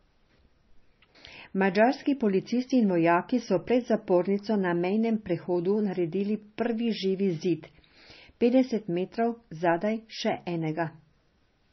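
Throughout this speech recording the sound is watery and swirly, with a metallic chirping on s sounds and consonant attacks smeared, and nothing at all comes through above 5.9 kHz, leaving it dull and boxed in. This is likely MP3 compression at a very low bitrate, around 25 kbps. Starved of bits, the encoder chopped off the treble at a fixed point and let weak frequency components flicker on and off from frame to frame, which produces the swirl and chirps.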